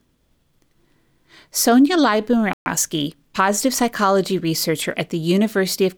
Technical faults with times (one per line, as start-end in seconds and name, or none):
2.53-2.66 playback stall
2.66-3.92 time-compressed catch-up